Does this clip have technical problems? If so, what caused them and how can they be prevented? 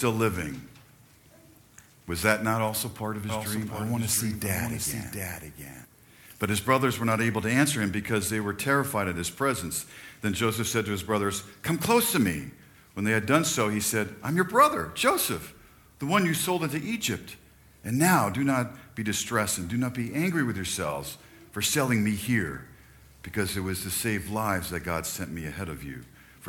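Yes. From 3.29 to 5.85 s a doubled audio track appears: one full-band copy trails roughly 0.7 s behind, a few dB quieter. Unlike an echo, it has no decay or room colour and starts and stops abruptly. A second, slower capture path or a misaligned edit is the likely cause. Prevent it by routing each source only once and checking edits for overlapping copies.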